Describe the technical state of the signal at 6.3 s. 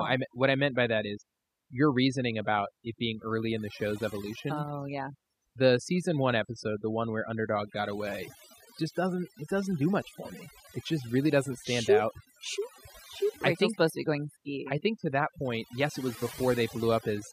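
At 6.3 s you're hearing overdone noise removal, and it's the same from start to finish, so this moment is typical. The noise reduction was pushed too hard: any frequency band near its noise estimate gets pulled way down or switched off, and the quieter parts of the speech go along with it. The background drops and breaks up into little twinkling specks.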